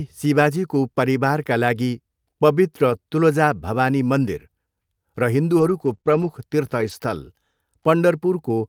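It's a speech recording with patches of lost packets rebuilt from error correction. The first is brief, around 2.89 to 2.95 s, between "शिवाजीको परिवारका लागि पवित्र" and "तुलजा भवानी". It sounds like a short rough, grainy stretch rather than a gap, because the decoder played a low-bitrate backup copy carried in the next packet. The same roughness returns at 5.57 to 5.95 s, 6.05 to 6.27 s and 6.79 to 6.93 s. The longer runs point to several separate packets dropped and patched the same way. Sitting inside that cluster are two short concealed packet losses, at 5.97 to 6.01 s and 6.01 to 6.05 s, each around 20 ms of missing audio. For those no backup existed, so the receiver stretched the last bit of sound forward and crossfaded back, giving a quick smear or wobble that could swallow a short consonant.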